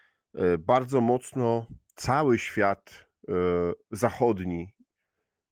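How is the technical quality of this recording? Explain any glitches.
The speech recording has no glitches, only the light footprint of Opus voice compression running in hybrid mode at full bandwidth, which fits a rate of around 20 kbps.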